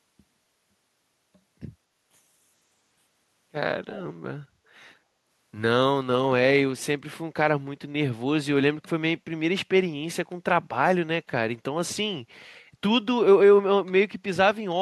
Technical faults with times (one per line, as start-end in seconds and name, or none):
3.90-4.03 echo leak